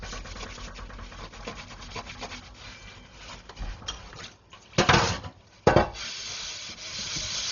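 From start to end, the sounds pass through what is likely Dolby Digital compression at a very low bitrate, consistent with something around 32 kbps. Starved of bits, the encoder has cut the band, leaving nothing above 6.9 kHz, and many frequency lines carry no detail, so the decoder fills them with noise. The damage is heavy: everything sounds dull and muffled, and a rough, fluttering grain clings to any tonal parts.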